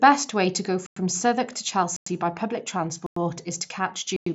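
Short holes of silence cut into the speech at 0.86, 1.96, 3.06 and 4.16 s, each 100 ms long: the first right after "way to go", the next just before "by public", the third after it. This is a gap between chunks: the audio arrives in 1-second pieces with silence inserted at each join. Nothing is lost, and the sound stops at the 7.7 kHz ceiling of the Bluetooth mSBC path.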